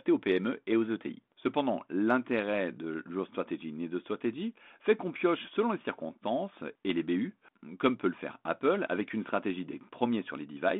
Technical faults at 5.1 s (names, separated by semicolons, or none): none